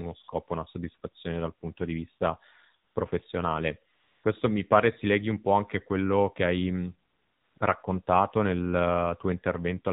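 From start to finish the speech passes through the AMR narrowband mobile codec. Everything above 4 kHz is missing, and the voice has a buzzy, synthetic edge because the codec rebuilds it from a vocal-tract model driven by a handful of pulses per 5 ms subframe. The damage is plainly audible and fits a low mode of around 7.4 kbps, where too few bits describe each 20 ms frame.

AMR comfort noise appears five times: at 0.24 to 0.28 s (40 ms), 2.86 to 2.96 s (100 ms), 3.94 to 4.24 s (300 ms), 7.10 to 7.56 s (460 ms) and 7.58 to 7.60 s (20 ms). In each gap the sender treated the input as silence and stopped sending speech frames. The receiver filled the space with smooth synthetic noise built from a coarse level and spectrum estimate, so the real background drops out and a steady hiss switches in and out.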